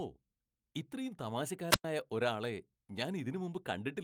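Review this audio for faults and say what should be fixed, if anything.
A brief swell of hiss at 1.69 s gives way to a hole of near silence lasting about 103 ms before the speech returns at 1.85 s. This is a wireless microphone squelch dropout: the transmitter's radio signal faded until the receiver's squelch muted the output. Keeping the transmitter in clear line of sight and close to the receiver antennas would prevent it.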